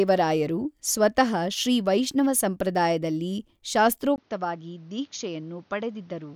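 At 4.16 s the speech drops out for about 20 ms, then returns duller, a little quieter, with nothing above 6.8 kHz and a faint new hiss well beneath it to the end. This is likely an input switched to a poorer device.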